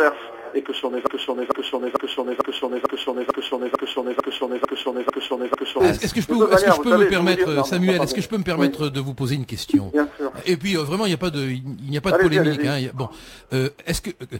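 A broken-record loop runs from 1.07 to 5.80 s: a 0.45 s fragment repeats eleven times, likely from a stalled player resending its last buffer.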